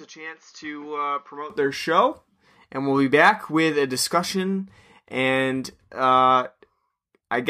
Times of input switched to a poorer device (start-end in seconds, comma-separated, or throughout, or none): 0.00-1.50